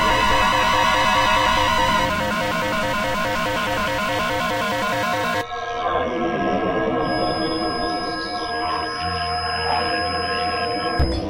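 An everyday-sound recording with a thin 5.1 kHz feedback whistle from 6.97 s to the end, about 10 dB under the sound, likely a loudspeaker-to-microphone loop. Its slow swelling and fading in level, unlike a fixed interference tone, betrays it.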